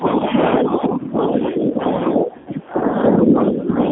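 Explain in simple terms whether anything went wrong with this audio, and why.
Three things went wrong. Throughout, the speech passes through the G.729 codec, a low-rate phone codec that rebuilds the voice from a simplified model. It cuts everything above about 3.5 kHz and leaves the speech plainly rough and slightly synthetic. Unlike the other faults, this never lets up.

From the start to 0.33 s, and again from 0.61 s to the end, the voice dips and thins in patches. This is speech suppressed in double talk, likely because an echo canceller mistook overlapping talk for echo and turned the voice down. Unlike a codec fault, it comes and goes in uneven stretches.

Between 2.38 and 2.49 s there is VoIP packet loss concealed by the speech codec. About 80 ms of audio went missing, which fits roughly four lost packets. The decoder filled the gap by stretching the last sound into a fading buzz or noise, so the speech sounds smeared there rather than briefly cut off.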